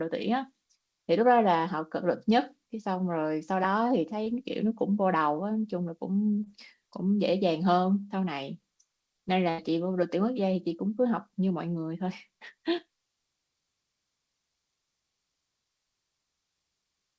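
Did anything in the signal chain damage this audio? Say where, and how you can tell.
Yes. The network stage shows short concealed packet loss at 4.24–4.28 s and 6.44–6.48 s, where about 20 ms went missing each time. The decoder extended the preceding sound, so you hear a brief smear or wobble rather than a hard click from a buffer underrun.

The network also produced a burst of packet loss at 9.50–9.60 s, with about 80 ms missing. Unlike a clean mute, concealment holds the last sound as a fading buzz or hiss, then the audio resumes further on with that stretch skipped, all within the G.722 call path's 8 kHz band.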